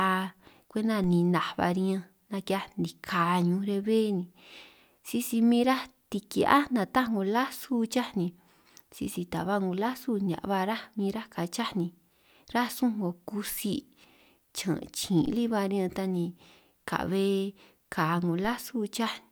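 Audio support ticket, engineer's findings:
DC step at 1.04 s (just before "ninaj ba riñanj"), 15.26 s and 18.45 s. Zero line jumps about -32 to -34 dBFS, heard as low thump, then offset decays through roughly 5 Hz high-pass.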